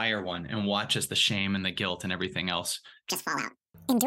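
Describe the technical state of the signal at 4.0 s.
At 4.0 s the audio sits inside a section at the wrong speed, from 3.10 s to the end at 4.07 s, likely played back against a mismatched clock. It runs 1.84 times too fast, so the speech turns hurried and rises by roughly ten semitones, close to an octave.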